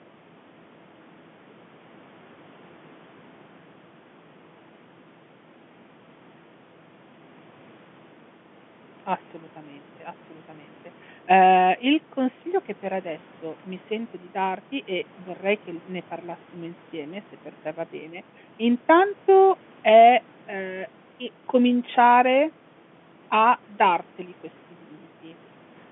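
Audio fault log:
Nothing stood out on listening; the speech sounds like an ordinary telephone call, with no audible problems anywhere in the clip.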